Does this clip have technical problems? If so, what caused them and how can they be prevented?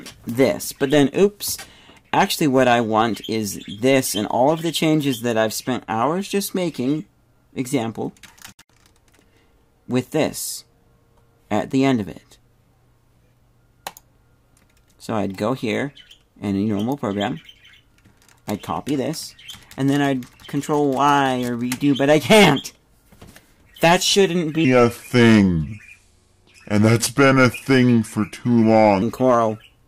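Yes: a section at the wrong speed, likely from a clock or rate mismatch, plays 24.65 to 29.02 s at 0.783 times speed, so the audio drops about four semitones and drags. Keeping playback and editing rates locked to the recording's sample rate prevents this.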